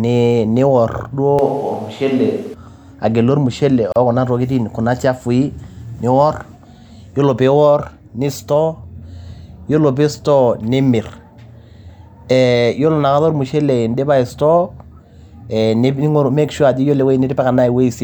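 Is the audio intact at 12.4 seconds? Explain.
Yes, the audio is intact at 12.4 seconds, with no dropout, click or distortion at that moment.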